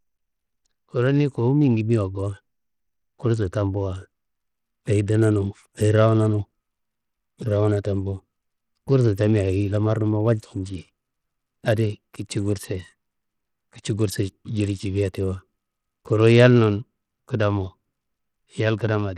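From start to finish the speech has flickering, dropped-out treble and a gritty, aliased edge, likely Bluetooth SBC compression at a starved bit pool, around 80 kbps.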